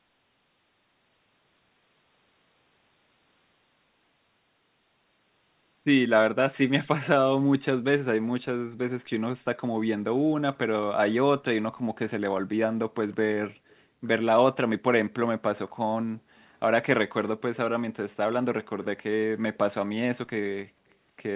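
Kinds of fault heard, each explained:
Echo leak: a faint, brief copy of the speech, well below the original, slips through from 13.11 to 13.15 s, trailing it by 170 ms. It likely comes from a far-end loudspeaker whose echo canceller missed some pickup. Unlike room reverberation, it is a discrete delayed repeat, not a smooth decaying tail.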